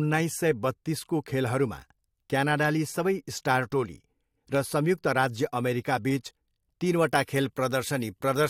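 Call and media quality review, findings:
Pre-emphasis left on, 6.86 s to end: speech turns thin, bright, sibilant; treble about 8 dB up at 10 kHz relative to 1 kHz, matching a CD 50/15 µs curve with no de-emphasis. Unlike a harsh mic or generic EQ boost, the rise starts abruptly mid-clip.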